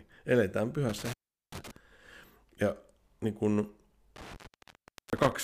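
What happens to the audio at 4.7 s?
At 4.7 s the speech sits inside an intermittent contact fault running from 4.16 to 5.32 s, just after "niin kun": a loose connection opens for about 770 ms, so the signal drops to faint hiss with crackle at each edge. On a waveform it shows as a near-flat gap bracketed by sharp spikes, and on a spectrogram as a dark band with broadband vertical streaks at its ends.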